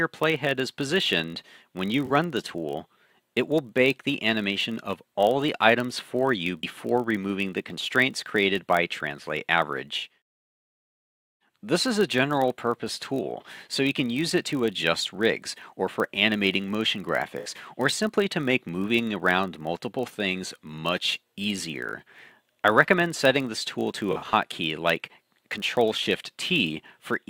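Throughout the clip runs a block size mismatch (padded). A buzz at 46.9 Hz, which fits a 1024-sample read block, comes from a tiny zero-filled gap that the writing stage leaves at the end of each block the next stage reads. The padding is slight, so the audio runs at 0.999 of normal speed, about 0.1% slow, with pitch essentially unchanged.

At 2.06 to 2.12 s, AAC frame loss with concealment leaves a smeared, noisy patch about 43 ms long, consistent with two lost frames that the decoder rebuilt from the last good spectrum. The same brief smear recurs at 9.98 to 10.04 s. At 17.39 to 17.49 s a 64 ms gap, pointing to three frames, sounds smeared and noisy. From 24.11 to 24.33 s, about 107 ms of concealed audio is scattered over some 213 ms, in runs no longer than roughly 40 ms, producing a smeared, noisy stretch.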